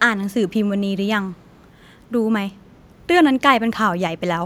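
Echo leak at 0.3–0.53 s and 1.34–1.67 s: faint speech copy 295 ms late, likely missed by an echo canceller, showing as weak, delayed harmonic traces.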